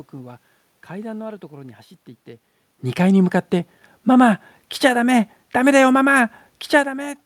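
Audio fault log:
No system faults were found in this speech clip. Background noise from the room is present, and the level of the voice shifts at around 2.5 s and again near 6.5 s as the talker moves relative to the microphone.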